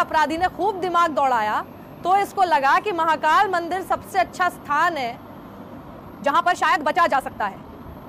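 From 5.97 s to the end, the sound suddenly turns rushed, running at about 1.41 times its earlier pace while its pitch stays put. This time-stretched section likely comes from software squeezing the audio to fit a shorter length, dropping short pieces to hold the pitch.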